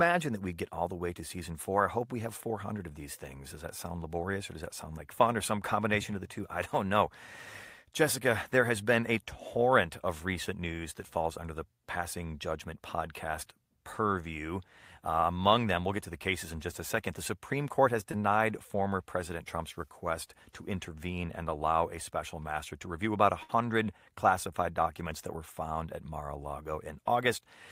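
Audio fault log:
18.11–18.15 s, short concealed packet loss: about 20 ms of the audio failed to reach the decoder in time, and the receiver covered the gap with roughly 16 ms of synthesized continuation, extending the preceding sound's pitch or noisy texture before crossfading back into the real signal. Because the hole is so brief, it registers only as a momentary smear or wobble.
23.43–23.51 s, burst of packet loss: about 60 ms of consecutive audio went missing, which fits several packets in a row dropping or arriving too late to play. The receiver carried the last sound forward for about 57 ms and faded it out as the gap lengthened, so a voiced sound becomes a held buzz and anything else a dying hiss. Playback then picks up further along, with the intervening audio simply gone.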